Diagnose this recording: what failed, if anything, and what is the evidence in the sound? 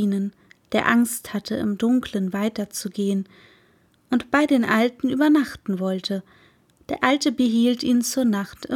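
Nothing failed; no stage leaves an audible fault here.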